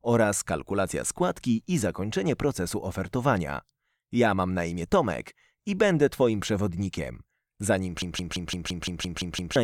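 At 8.02 s a system hang loop begins and runs to 9.56 s. The same 170.67 ms fragment, which fits an 8192-sample buffer, repeats nine times at 5.86 Hz as a machine-gun stutter, because playback kept cycling one buffer while the system froze. About one and a half seconds of audio is lost.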